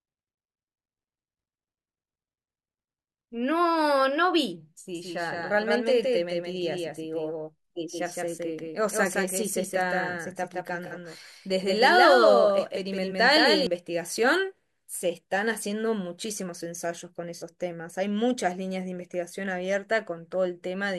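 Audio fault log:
4.95 to 13.67 s, doubled audio track: the speech gains a hard, slap-like second copy about 5 dB quieter, trailing roughly 150 ms behind with no room tail, and cutting in and out abruptly. This likely comes from the same signal reaching the mix twice, once through a slower path.
10.86 to 10.92 s and 17.37 to 17.44 s, AAC frame loss with concealment: each gap is a brief smeared, phasey blur lasting about 43 ms, consistent with two lost frames. The decoder patches the gap by reusing the last good spectrum with scrambled phase.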